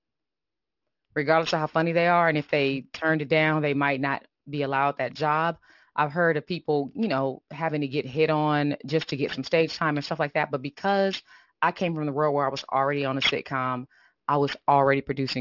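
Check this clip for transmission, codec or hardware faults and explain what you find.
One fault is present: aliasing throughout the clip. High speech energy above 6 kHz, consistent with resampling from 48 kHz to 12 kHz unfiltered, folds back downward as gritty, metallic sibilants. Spectrograms show mirrored energy packed hard against 6 kHz.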